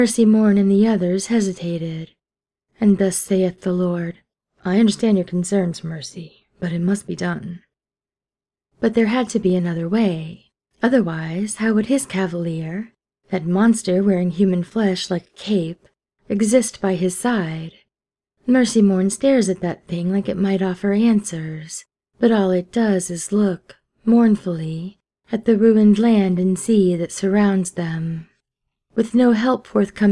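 Nothing technical stands out anywhere in the audio, so there's no problem to point to here.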